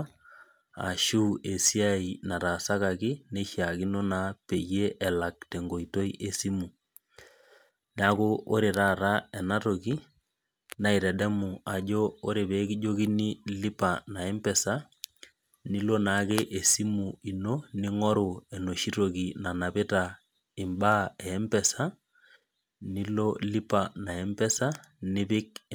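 From start to finish the speech carries sample clock jitter. The converter's clock wobbles by something like 2 microseconds, so each sample lands a touch early or late. That timing slip causes the biggest errors wherever the waveform is changing fastest, leaving a grainy hiss roughly 30 dB under the signal. You'll hear it swell on the louder, brighter syllables and sibilants, then drop away completely in the pauses.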